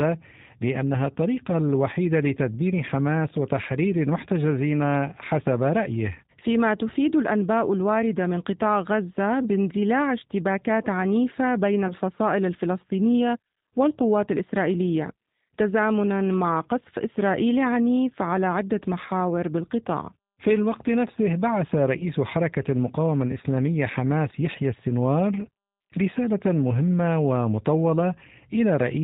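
The whole clip runs through the G.729 codec at 8 kbit/s, so everything above 4 kHz is gone and the speech comes out a bit rough and synthetic, since the decoder rebuilds each short frame from a vocal tract model plus a handful of pulses. Around 11.88 to 11.93 s, and again from 21.98 to 22.04 s, there's VoIP packet loss concealed by the speech codec. Each gap of roughly 20 ms points to a single lost packet. The decoder stretches its last pitch and filter into a brief buzzy tone or coloured noise that fades, and the sound takes a moment to firm up afterwards.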